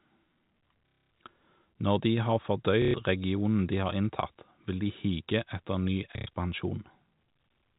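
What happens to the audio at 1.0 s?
At 1.0 s the speech is caught in packet loss with last packet repeated, from 0.87 to 1.11 s. Lost packets are replaced by replaying the last one, so a roughly 33 Hz buzz suggests 30 ms packets. That mechanical stutter sets it apart from a silent dropout.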